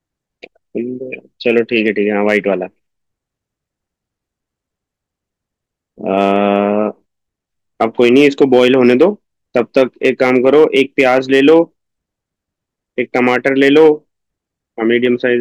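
Hard clipping runs through this speech. It first hits at 1.48 to 1.88 s, then 2.29 to 2.37 s and 6.17 to 6.56 s. Heavier stretches follow at 7.81 to 9.05 s, 9.57 to 11.59 s and 13.16 to 13.89 s. A final brief touch comes at 15.05 s. Peaks exceed what the stage can pass, by about 1 to 4 dB, and are sliced flat. The flat tops add high harmonics. Light passages crackle on peaks. The longer, harder ones sound like a harsh fuzz.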